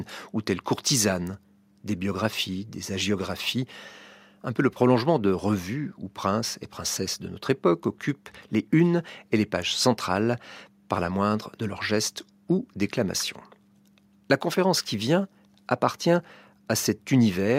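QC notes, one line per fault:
No fault found in this speech clip.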